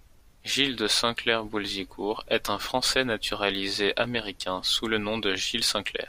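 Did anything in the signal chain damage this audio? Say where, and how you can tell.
No, there's no audible damage from any stage of the chain in this speech recording.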